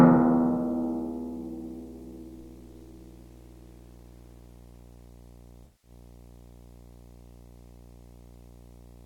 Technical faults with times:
0.00-9.06 video or display buzz
5.64-5.91 AAC frame loss with concealment

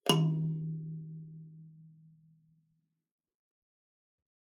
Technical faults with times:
none

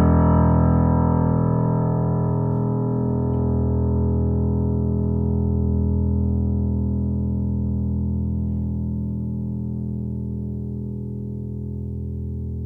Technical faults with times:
none

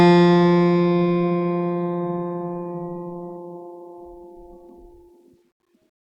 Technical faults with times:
none

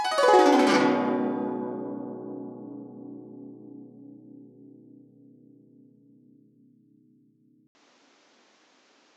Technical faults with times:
7.67-9.17 input switched to a poorer device

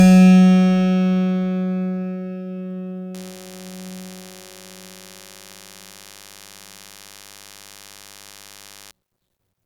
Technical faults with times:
3.14-8.91 DECT cordless phone buzz

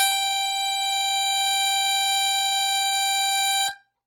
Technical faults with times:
0.00-4.06 Opus compression

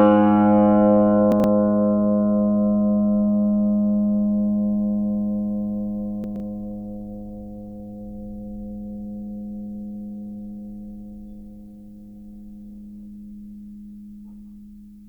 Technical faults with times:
1.32-1.44 chunks out of order
6.24-6.40 chunks out of order

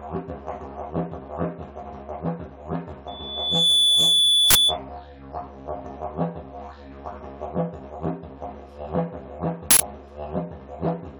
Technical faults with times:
3.07-4.78 loudspeaker feedback squeal
4.50-4.55 uninitialised buffer
9.71-9.80 uninitialised buffer

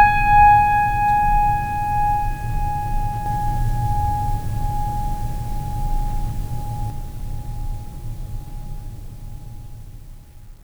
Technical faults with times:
3.26-6.90 doubled audio track

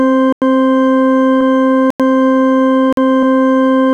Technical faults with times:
0.33-0.42 block of digital silence
1.41 compressed frames skipped
1.90-2.00 block of digital silence
2.93-2.97 block of digital silence
3.23 compressed frames skipped

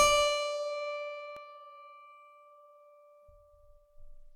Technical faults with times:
1.36 underrun with held sample

